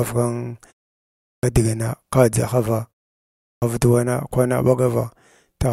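At 1.26 s, after a 0.62 s pause, and again at 3.42 s, following "ka dʒahava" and a 0.57 s pause, the output shows a clipped start after a pause. The playback path goes idle during silence and needs time to wake, so the opening 172 ms and then 200 ms of the following speech never sound. The words snap in abruptly, missing their first sounds. Muted pauses quiet the gaps but bring speech back intact.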